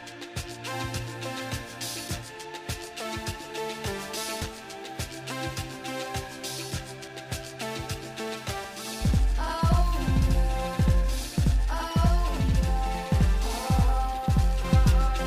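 From 8.64 s to 14.64 s every sound arrives twice, the second copy trailing the first by about 85 ms at equal strength, so attacks smear into a doubled slap that never decays the way a room echo would. This is channel delay (doubling): one channel fell a long buffer behind the other, which fits a 4096-sample buffer at 48 kHz, and when the two were folded to mono the late copy landed as a separate, full-level repeat.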